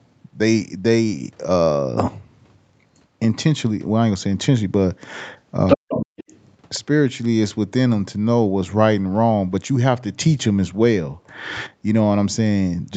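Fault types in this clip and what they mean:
Other side's voice leaking through, 5.67 to 6.39 s: a second voice comes through for about 0.7 s at roughly the same loudness as the talker. It is likely loudspeaker playback of the far end that the echo canceller failed to remove from the microphone.
Speech suppressed in double talk, 5.76 to 6.17 s: while that second voice is present, the talker's own voice drops very deeply, almost to silence, in pieces adding up to about a third of a second. The likely cause is an echo canceller that could not separate the two voices and turned both down.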